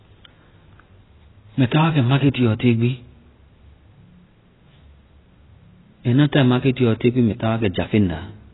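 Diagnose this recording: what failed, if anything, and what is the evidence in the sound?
At the codec stage, likely AAC compression at a very low bitrate removes everything above 3.9 kHz throughout, so the speech sounds dull and smeared.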